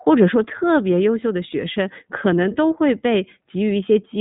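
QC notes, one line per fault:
Throughout, iLBC codec: the speech has a plainly audible rough, slightly synthetic edge, as each short frame's excitation is coded on its own with no carry-over from the frame before, which fits 20 ms frames at a 15.2 kbps rate. On a spectrogram, all energy stops sharply at about 3.8 kHz with empty space above, with small discontinuities repeating at the frame rate.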